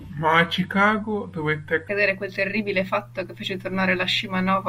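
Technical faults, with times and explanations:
0.00–1.88 s, section at the wrong speed: the opening speech runs at 0.8 times its recorded rate, so it drags and sits roughly four semitones low until normal pace returns, likely from being played against the wrong clock, which shifts speed and pitch together.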